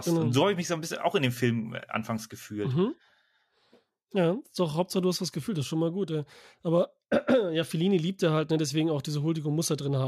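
No technical faults can be heard anywhere in the speech recording.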